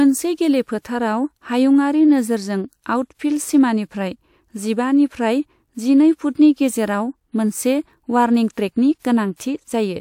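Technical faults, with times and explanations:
0.79–0.85 s, 8.52–8.57 s and 8.99–9.02 s, pre-echo: the transform codec spread block-wide quantisation noise ahead of sharp attacks, so a short hiss runs about 57, 57 and 33 ms before each onset, which sounds smeared.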